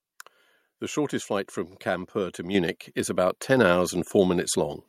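A speech clip with two sudden level steps. Both are the microphone volume stepped up. At 2.55 s, just before "is about", the whole signal jumps by about 6 dB. At 3.57 s, just after "is about", it rises again by about 3 dB. Voice and background noise climb together each time. That points to the input gain changing at the device. The call software judged the microphone too quiet and raised its volume in single steps.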